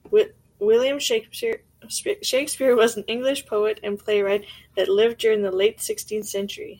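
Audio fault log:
1.53–6.22 s, clock drift buffer slips: regular clicks every 1.56 s, about four, likely from mismatched device clocks forcing a short block to drop or repeat.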